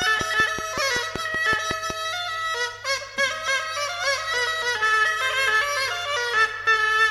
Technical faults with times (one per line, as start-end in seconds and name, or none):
0.02-1.91 train of clicks